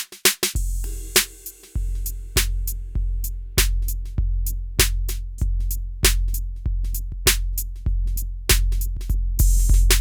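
No technical faults are audible.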